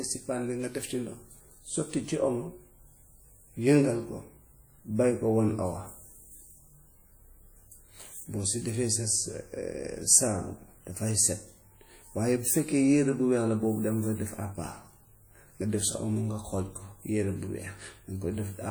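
Throughout the speech, plainly audible ringing and washy smearing, with hiss breathing alongside the signal, is likely WMA compression, which fits a 48 kbps encode.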